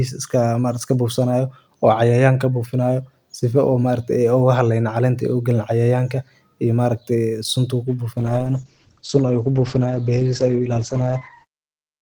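Speech clip with a call bitrate drop that hits at 8.19 s and lasts to the end. From that point the sound goes rough and dull. The encoder's budget falls from 64 kbps to 11 kbps, so it quantises far more coarsely, and the audio band shrinks from 20 kHz down to 8 kHz, taking the air and sibilance with it. It never recovers before the smooth fade-out in the last half second or so.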